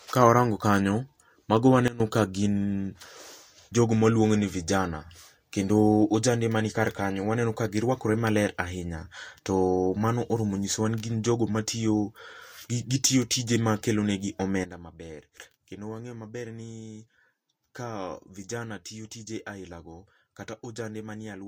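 At 1.88 s, just after "warango kanyo mago", the speech and its background noise together drop by about 16 dB in a sudden gain jump, then recover at 2.0 s before "ka gin". At 14.64 s, after "gitiyo tije ma kelonegi", a second step cuts everything by about 12 dB and holds to the end. The step changes with no fade point to a gain setting likely applied instantly, without a ramp.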